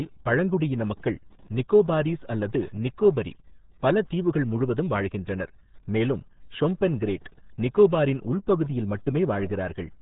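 RealAudio 14.4 codec damage runs through the whole speech clip. The sound is squeezed through a dial-up era speech coder whose heavy damage fits an 8 kbit/s stream. Nothing passes above about 3.8 kHz, leaving the speech muffled and gargly.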